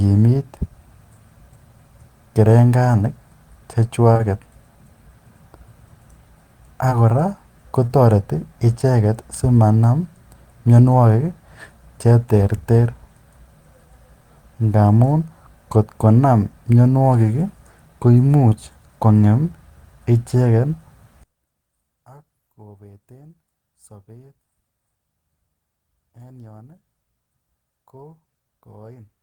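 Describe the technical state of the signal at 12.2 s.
At 12.2 s the signal is intact, with no audible technical fault at that point in the speech.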